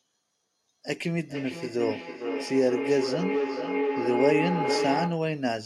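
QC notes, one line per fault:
1.11–5.38 s, feedback howl: a tone near 400 Hz swells to within about 1 dB of the speech level, pulsing roughly every half second. A microphone is picking up a nearby loudspeaker on the same call, so each trip round the loop grows louder.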